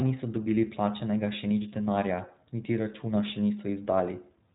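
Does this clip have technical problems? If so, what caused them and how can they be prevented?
Yes: throughout, iLBC codec damage, with nothing above 3.8 kHz and slightly rough, synthetic speech. Unlike a plain low-pass, independently coded frames, likely 20 ms at 15.2 kbps, add texture. Prevent it with a wideband codec.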